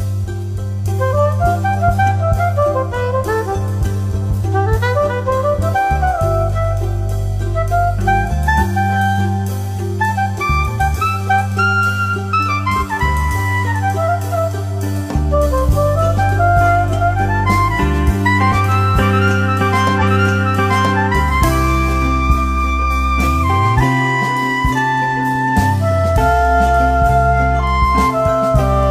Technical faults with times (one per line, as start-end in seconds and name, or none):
19.97-20.95 stream segment repeated